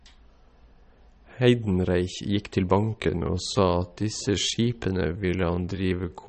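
MP3 compression runs through the whole of this speech clip. The codec damage is plainly audible as a watery, swirling texture where weak frequency components drop in and out between frames, and nothing is left above 8.4 kHz, which fits a low bitrate around 32 kbps and likely MP3 encoding. A time-stretched section follows from 2.73 s to the end at 6.28 s, where the pace abruptly slows to 0.63 times normal speed while the pitch holds steady, likely because software lengthened that stretch by repeating short pieces of the audio.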